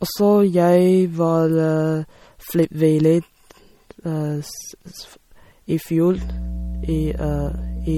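From the start, the speech carries plainly audible damage consistent with MP3 compression, likely at a low bitrate, which fits something near 48 kbps. With too few bits to go around, the encoder leaves nothing above 18.8 kHz and drops quieter frequency lines that then flicker in and out from frame to frame. The result is a watery, swirling texture, metallic chirping on s sounds, and consonant attacks that smear rather than snap.

At 6.18 s, mains hum enters and continues to the end of the clip. Power-line energy is leaking into the signal path, as happens with a ground loop or a nearby transformer, and it arrives as a steady 60 Hz tone with some low harmonics. It sits only around 10 dB below the speech, so the low drone is clearly heard under every syllable for those last couple of seconds.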